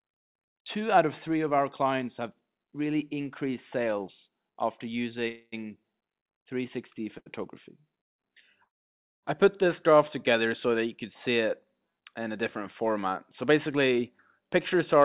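At 5.28 to 5.54 s there is a call audio freeze: the last sound carries on as a fading buzz or hiss for 242 ms before the audio resumes where it stopped, with nothing lost. The likely cause is packets held up in transit, draining the jitter buffer.

At 7.18 s, a short stall from a late packet holds the sound for 77 ms, heard as a buzz or dip, until the packet arrives and playback continues from the same point.

A second call audio freeze runs from 8.65 to 9.25 s. After a brief continuation of the last sound, 540 ms of silence follows, for 574 ms inserted in total. Nothing is missing once playback resumes.

Jitter buffer speed-up appears at 13.42 to 14.00 s (107% speed, roughly 50 ms removed) and 14.40 to 15.01 s (106%, roughly 40 ms). The receiver trimmed repeated pitch-period slices to shed excess buffered delay, so the sound runs hurried at unchanged pitch. Throughout, the G.711 call path leaves no content above 4 kHz.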